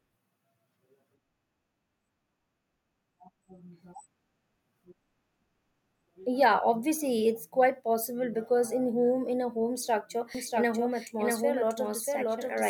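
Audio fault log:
10.35–12.69 s, doubled audio track: right after "in a home structure", a second copy of the speech, likely from a slower capture path, cuts in abruptly about 0.7 s behind and roughly 5 dB quieter, so every phrase repeats as a dry, full-band echo until the end.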